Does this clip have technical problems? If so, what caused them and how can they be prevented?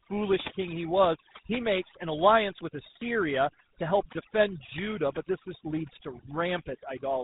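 Yes, two faults run through the whole clip of speech.

Overdone noise removal: a noise reducer set far too aggressively mutes any frequency band close to its noise estimate, so the quieter parts of the speech vanish with the hiss. The pauses drop and break up into twinkling specks. On a spectrogram the background becomes dark with scattered isolated dots, and the speech shows ragged, holed harmonics. Prevention: use gentler reduction settings, or capture a cleaner signal in the first place.

Tandem speech coding: the call was decoded and re-encoded at each link boundary, so every coder worked on the previous one's damage. The sound points to a chain ending in GSM full rate, with two speech codecs in a row, giving rough, muffled, warbly speech. A spectrogram shows nothing above 3.8 kHz and smeared, blotchy formants. Prevention: keep one codec end to end, or pass the coded stream through without transcoding.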